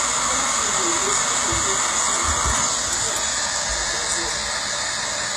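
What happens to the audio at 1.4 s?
HE-AAC compression at 1.4 s, as throughout: treble likely rebuilt from copied lower bands sounds gritty and metallic, with nothing above 12.3 kHz, fitting about 16 kbps.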